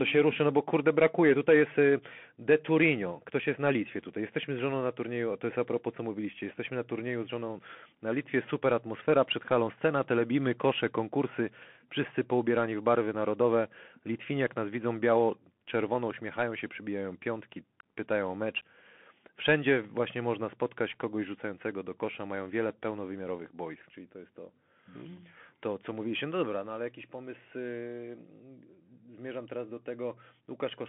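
Throughout, the speech passes through a Bluetooth CVSD headset codec, its one-bit slope coding leaving scratchy sibilants, granular hiss, and a spectrogram empty above 3.8 kHz.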